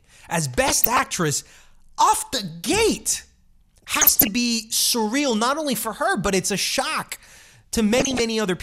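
DAB burbling breaks into the speech four times: 0.68 to 1.14 s, 3.74 to 4.28 s just before "be surreal not only", 6.26 to 6.34 s between "not only for her" and "it's a shock", and 7.93 to 8.20 s. Weak reception lets a fraction of a percent of bits slip past error correction, corrupting samples and scale factors so individual sub-bands get short blips of noise or jump in level for up to a frame, giving a burbling over the speech.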